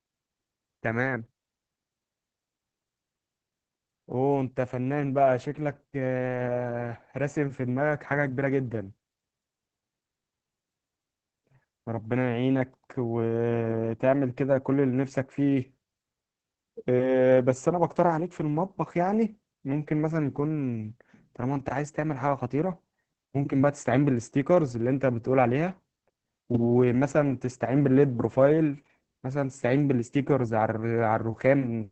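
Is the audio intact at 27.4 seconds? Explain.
No, at 27.4 s you're hearing Opus voice compression, present throughout: SILK coding capped at 8 kHz with coarse excitation, so speech sounds muffled and hoarse, fitting roughly 10 kbps.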